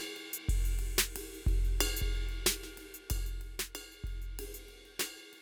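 From 2.90 to 3.58 s the level falls about 10 dB in unsmoothed jumps of about 2 dB, causing zipper noise that ticks over the music.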